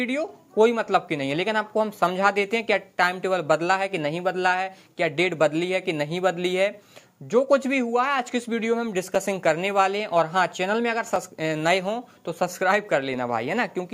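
Periodic USB or driver dropouts from about 9.15 s to 13.14 s: a blocked bus every 2.0 s drops a few milliseconds to silence, giving regular ticks.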